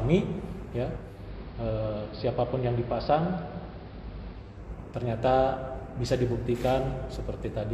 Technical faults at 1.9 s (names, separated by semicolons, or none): digital radio blending to analogue